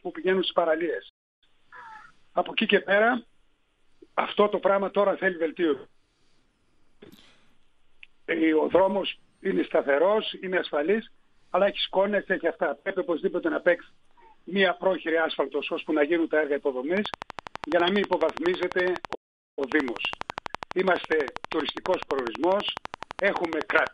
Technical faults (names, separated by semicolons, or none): playback stall; train of clicks